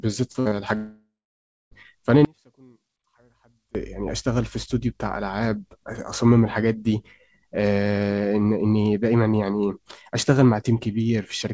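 The speech opens with a cluster of packet losses. At 0.32 to 0.37 s there is a short concealed packet loss: about 30 ms of audio never arrived in time, and the receiver bridged it by extending the preceding sound before blending back. It is heard as a quick smear in the voice. On a spectrogram the preceding sound runs on unnaturally unchanged for a moment; the waveform shows a brief stretch of too-regular, copied-looking material. A second short concealed loss comes at 0.48 to 0.54 s, again about 30 ms, with the same brief wobble and the same smoothed, copied-looking patch.

Between those two, from 0.40 to 0.48 s, a burst of packet loss removes about 60 ms. The decoder kept synthesising from the last sound and turned it down, so a short fading buzz or hiss replaces the real speech, which then resumes further on with a piece missing. The spectrogram shows the held sound fading in level, and the waveform envelope shrinks steadily before the real signal snaps back.

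From 0.75 to 1.74 s there is a long network dropout, likely caused by a stretch where nothing reached the receiver. The last sound is drawn out as a fading buzz or hiss, and for the final 0.6 s or so only silence remains before speech returns mid-flow, with the lost part gone. On a waveform it looks like a decaying, repetitive segment followed by a flat line. The spectrogram shows the smeared, thinning continued sound, then an empty band.

From 2.25 to 3.75 s comes an audio dropout to a faint residue. For about 1.5 s the speech abruptly gives way to a faint sound about 35 dB below normal level, most likely because the signal was lost while the path after the break stayed live. The cut and the return are sudden, not a pause or fade. The waveform collapses to a thin trace with hard edges, and the spectrogram goes dim across the band, which stops at 8 kHz as the G.722 call path leaves it.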